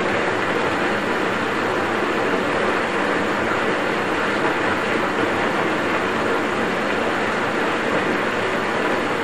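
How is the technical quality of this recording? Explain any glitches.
No glitches can be heard anywhere in this recording of sounds. There is nothing to explain, since the audio runs without any technical fault.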